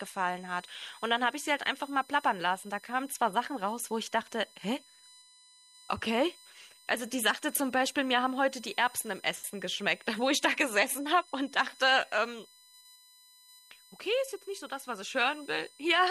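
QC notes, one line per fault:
Throughout, USB whine: a steady fixed-pitch tone at 1 kHz with harmonics, strongest at 4 kHz, sits roughly 25 dB below the speech. The bus's 1 ms frame timing pulls current in bursts that leak into the audio through shared power or ground.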